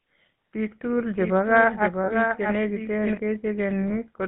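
GSM full-rate codec, throughout the clip: the speech has passed through the original GSM coder, which fits a 13 kbps full-rate link. The codec reduces speech to a vocal-tract filter excited by a sparse, evenly spaced pulse train, and the line carries only about 150 Hz to 3.7 kHz. Here the damage is plainly audible: a buzzy, gravelly grain on every voiced sound, with the top end cut away and a narrow telephone tone.

Doubled audio track, 1.19 to 3.17 s: a second full-band copy of the same speech runs roughly 0.7 s behind the first and a few decibels quieter. It has no reverb tail or room colouring, and it switches on and off abruptly at those times. The likely cause is the signal being picked up twice, once through a slower path, or an edit leaving two misaligned copies layered together.

Lost GSM frames, 2.04 to 2.13 s and at 3.88 to 3.96 s: the decoder received unusable frames and filled the gap by repeating the last good frame's parameters. 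The first loss spans 40 ms, which fits two 20 ms frames. The second spans 20 ms, which fits a single frame. Each one is heard as a brief rough, metallic hold in the speech before normal decoding resumes.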